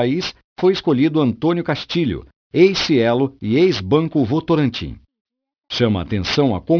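Aliasing runs through the whole recording. The speech was downsampled without an anti-aliasing filter, which fits a conversion from 44.1 kHz to around 11 kHz. Energy above the 5.5 kHz fold point reflects back down into the audible band as unrelated, inharmonic tones, sitting roughly 15 dB below the signal. Sibilants come out gritty and metallic rather than crisp, and the spectrum stays dense right up to the 5.5 kHz edge instead of rolling off.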